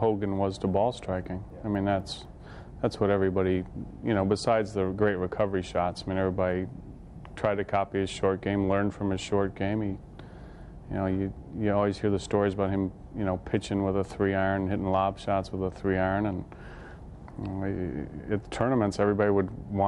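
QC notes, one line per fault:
1.0–2.5 s, resampler restarted on every block: regular ticks at 4 per second, one every 250 ms. Each block was converted alone, apparently from 24 kHz up to 48 kHz, so its edges lacked neighbouring samples. Every boundary carries a small error that ticks only under signal.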